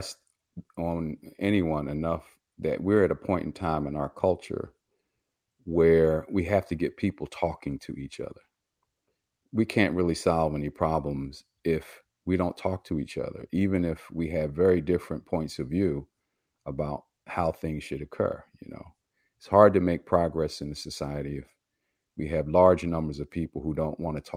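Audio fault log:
No technical faults can be heard in the speech signal, which stays steady and continuous across the whole recording.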